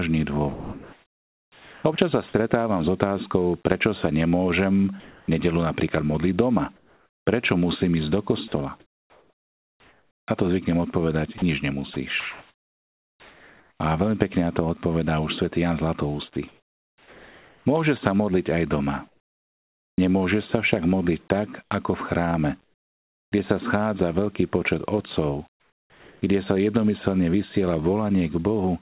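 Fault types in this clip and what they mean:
Sound chopped by the voice detector: The speech turns choppy, with quiet edges dropping out, over 0.52–2.34 s, 5.0–13.8 s and 16.34–19.98 s. About 1.4 s, 4 s and 2.1 s are lost, likely to a voice detector repeatedly toggling transmission.
Comfort noise in place of the background: At 22.64–23.32 s and 25.5–26.22 s the room sound becomes a flat, featureless hiss, about 9 dB and about 4 dB quieter, likely synthetic fill generated by the receiver while the sender paused transmission during silence.
Onset clipped by the voice detector: The speech resuming at about 23.3 s starts abruptly, its first 20 ms missing and covered by the hiss. The likely cause is a voice detector that was slow to register the restart.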